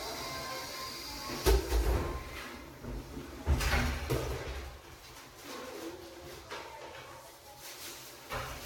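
From the very start and all the way through, the recording has that swirly, smeared, hollow texture, and transients land soft instead of crisp. It sounds like generation loss: the audio was likely decoded and re-encoded around five times, in a way that fits Vorbis at roughly 66 kbit/s. Each pass requantises on a shifted frame grid, so the noise and spectral gaps pile up. Nothing survives above 19.1 kHz.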